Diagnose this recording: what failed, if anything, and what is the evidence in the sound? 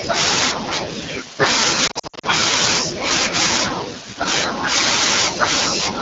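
The codec stage failed: the AMR wideband (HD Voice) codec is running at a very low rate throughout. The speech has a rough, raspy, buzzy texture, which fits the 8.85 kbit/s mode. On a spectrogram, harmonics below 6.4 kHz look smeared and grainy, with noisy fill between them. The 6.4 to 7 kHz band shows flat, noise-like energy with no harmonic structure, and the spectrum stops sharply near 7 kHz.

The network or radio stage also failed, causing lost AMR speech frames between 1.87 and 2.27 s. Across this 0.4 s stretch the speech warbles, dips and briefly fades, then returns thin and rough. This fits frames failing their checksum: the decoder repeats the last good pitch and vocal tract settings at falling gain. The losses total about 220 ms, in runs of up to 60 ms. On the waveform this shows as repeated amplitude dips, and on the spectrogram as frozen or smeared harmonics.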